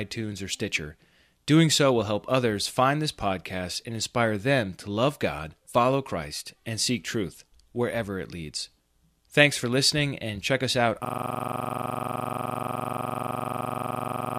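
A system hang loop starts at 11.05 s, right after "and check us out", and runs to the end. The playback froze while the hardware kept replaying one 42.67 ms slice, which fits a 2048-sample buffer, so the same sound repeats rapidly at 23.4 Hz.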